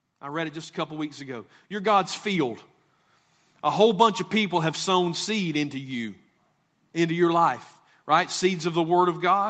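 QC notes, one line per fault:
0.05–2.56 s, automatic gain rising: the speech and the background noise swell together by about 9 dB over two and a half seconds. The automatic gain control judged the input too quiet and raised its gain gradually, lifting everything at once.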